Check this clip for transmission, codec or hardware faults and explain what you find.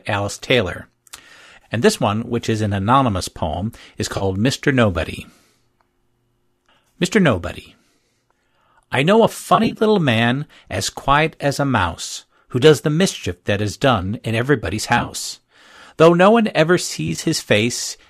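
One fault recurs in the speech, over light coding that likely comes from low-delay AAC.

AAC frame loss with concealment occurs at 0.77 s, 4.17–4.24 s, 9.55–9.78 s, 14.98–15.15 s and 17.08–17.19 s. The decoder rebuilds missing frames of about 10 ms from the last good spectrum, leaving brief smeared, noisy, phasey patches. The last three are clusters of short gaps rather than single holes.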